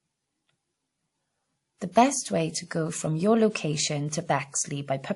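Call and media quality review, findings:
Transcoding between lossy codecs, throughout: different codec artefacts heard together; spectrogram shows a hard ceiling at 11.2 kHz. Likely a low-rate MP3-like pass, then WMA re-encoding those artefacts.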